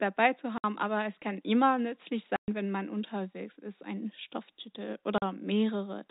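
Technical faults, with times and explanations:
0.58 s, 2.36 s and 5.18 s, packet loss filled with silence: dropped packets became silence, cutting 60, 120 and 40 ms holes, consistent with 20 ms packets.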